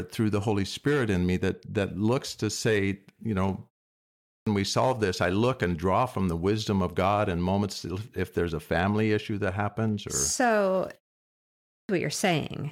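At 4.14 s and again at 11.57 s there's a clipped start after a pause: the output device dozed off during the 0.52 s and 0.65 s gaps and needed about a third of a second to wake, so roughly 320 ms of speech vanishes and each phrase lurches in abruptly.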